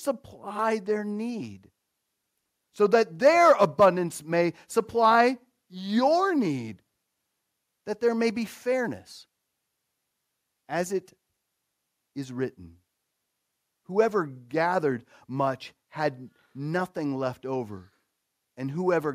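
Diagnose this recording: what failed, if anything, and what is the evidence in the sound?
Nothing failed: across the whole speech recording there are no dropouts, clicks, distortion or level jumps that would point to any stage in the chain.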